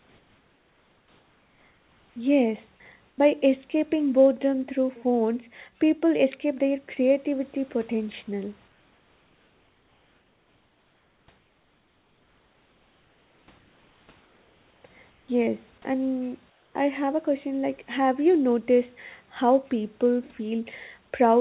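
Comfort noise in place of the background fills the pauses at 0–2.16 s, 3.1–3.18 s (just before "escaping boredom through phones"), 8.68–11.28 s (after "escape their creativity potential"), 11.38–13.48, 13.58–14.08, 14.2–14.84, 15.1–15.28 and 16.5–16.74 s (before "I have a question"). The likely cause is discontinuous transmission: the real room background is swapped for steady, featureless hiss about 2–5 dB quieter. On a spectrogram these gaps show as smooth, uniform noise bands. On the waveform the noise floor dips slightly during each gap.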